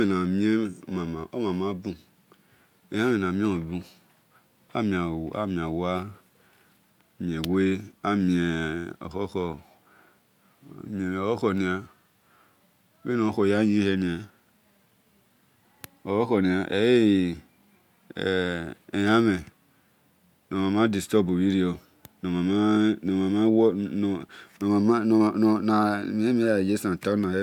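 Nothing in this bit of speech trips any alarm, so there's no fault to walk through.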